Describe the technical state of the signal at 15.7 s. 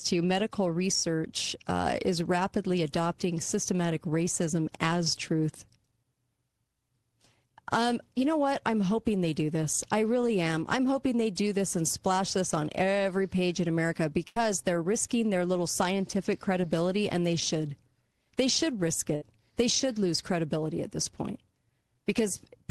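At 15.7 s the speech signal is intact, with no fault present; only the ordinary coding character of the Opus call path can be heard there.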